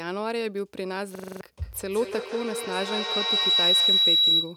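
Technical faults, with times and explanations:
1.15–1.41 s, system hang loop: the same 42.7 ms slice of audio repeats six times, which fits a 2048-sample ring buffer cycling while the system froze, giving a buzz at 23.4 Hz. About a third of a second of speech is lost. The waveform shows six identical blocks, and the spectrogram shows repeated identical columns.
1.62–4.56 s, feedback howl: a microphone-to-loudspeaker loop gains level on each pass and narrows to a tone around 4 kHz, repeating about every 150 ms and peaking about 8 dB above the speech. It runs to the end. The spectrogram shows a bright, narrowing horizontal line, and the waveform envelope swells.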